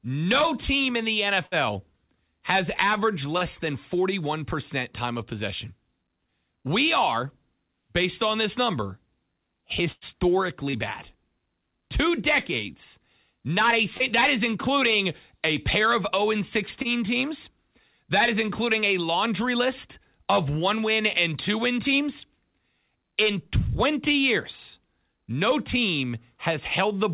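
Speech heard over a call link whose band stops at 4 kHz, which fits a narrowband G.711-style codec, with two kinds of dropout. The burst of packet loss occurs at 1.46–1.55 s, right after "no team in the", and at 9.92–10.04 s. In each, the last sound is stretched into a fading buzz or hiss, about 60 ms and about 95 ms long, and then the speech jumps ahead past a real gap. What sets these apart is the audible skip. The short concealed packet loss is briefer: about 30 ms smears or wobbles at 3.38–3.44 s after "has averaged", at 10.70–10.76 s, at 13.97–14.03 s between "decades not a" and "is including a pair", and at 16.82–16.88 s, each blended back smoothly into the speech.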